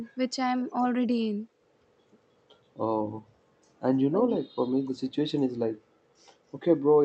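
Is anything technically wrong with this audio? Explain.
Yes, there is an echo leak. From 4.12 to 4.37 s, an echo canceller likely passed its loudspeaker's pickup back, so the speech returns 293 ms late, around 10 dB quieter.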